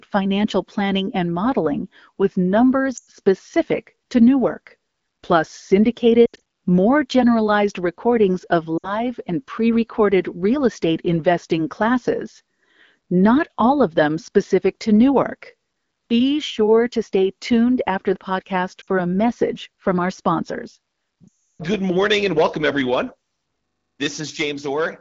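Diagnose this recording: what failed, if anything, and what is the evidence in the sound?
Lost AMR speech frames, a network fault on the radio link. Dropouts occur at 2.97, 6.25, 8.78, 18.81 and 21.27 s. The last is 0.32 s long, after "message from our sponsors". The decoder stretches the last good sound, fades it, then resumes roughly.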